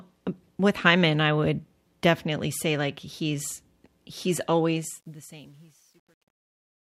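From 4.73 s, right after "say like he's he's", the fade-out picks up truncation distortion on a fade. The gain stage is dropping low-order bits without dither, which fits roughly 10-bit resolution, so the falling waveform collapses into a few coarse square steps. The tail turns gritty and buzzy, and from 5.15 s to the end at 6.86 s it is at its worst.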